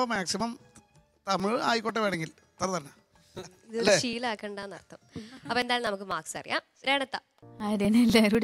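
From 0.16 s to 8.35 s, small ticks recur at a steady spacing of 0.248 s, about 30 in all. This is periodic USB or driver dropouts. Something stalls the USB bus or audio driver on a fixed cycle. Each time, a couple of milliseconds of audio are skipped, not filled with silence. The waveform jumps at each splice. That jump makes a clean, regular click. It is heard only while sound is present.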